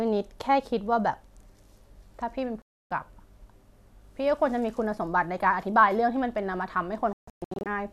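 At 2.62 s the speech cuts out for 0.29 s, a digital broadcast dropout: the receiver stopped getting decodable frames and muted until clean ones arrived at 2.91 s, so that stretch is simply gone. On a waveform it shows as a flat gap, and the spectrogram goes blank top to bottom. A second dropout runs from 7.13 to 7.66 s as scattered holes, the longest 0.14 s, leaving the sound chopped into fragments with stacked vertical gaps.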